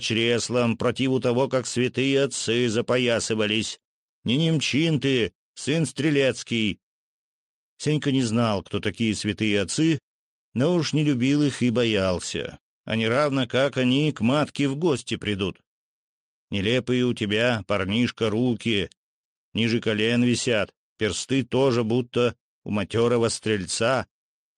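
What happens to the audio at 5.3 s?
Nothing goes wrong at 5.3 s: the audio plays through that moment intact, with no dropout, click, glitch or other technical fault.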